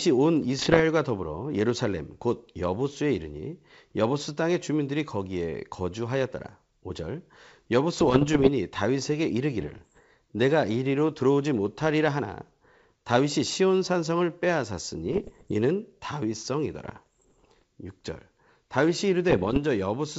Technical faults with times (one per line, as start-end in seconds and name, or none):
0.59-0.80 bit errors on an ADPCM link
7.98-8.49 bit errors on an ADPCM link
9.60-10.00 bit errors on an ADPCM link
15.06-15.51 bit errors on an ADPCM link
16.84-17.63 bit errors on an ADPCM link
19.29-19.59 bit errors on an ADPCM link